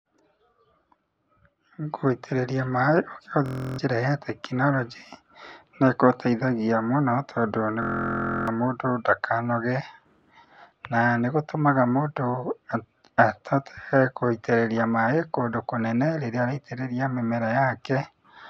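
At 3.46 s and again at 7.83 s the speech locks into a system hang loop: a 23.2 ms slice repeats at 43.1 Hz, which fits a 1024-sample buffer, giving a steady buzz. The first eats about a third of a second, the second most of a second.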